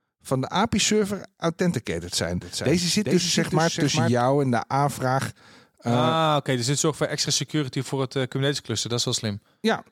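From 2.41 to 4.21 s, after "authenticated zijn", a doubled audio track: a copy about 5 dB quieter trails about 0.4 s behind, with no echo-like decay.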